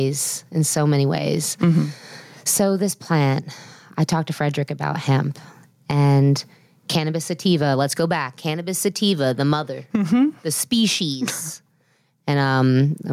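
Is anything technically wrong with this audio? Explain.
Yes. Gain pumping runs through the whole clip. The level swings by around 5 dB, dropping on each loud moment. Likely cause: gain set far too high, with a fast limiter or compressor pulling it down. Loud and soft parts sound squashed together.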